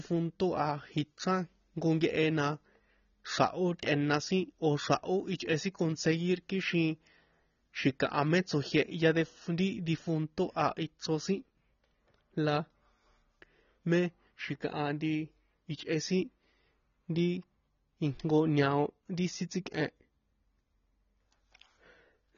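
From start to end, nothing sounds above about 6.9 kHz, and the speech has a smeared, warbling texture on sibilants. This is likely AAC compression at a low bitrate, consistent with 24 kbps. That swirling artefact sets it apart from a simple low-pass filter, which only dulls.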